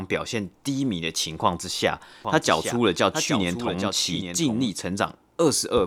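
From 2.25 s to 4.71 s a doubled audio track appears. A dry, full-band copy trails around 0.7 s behind, roughly 10 dB quieter, starting and stopping abruptly, likely from a second, slower capture path. A spectrogram shows each harmonic pattern repeated, fainter and shifted right.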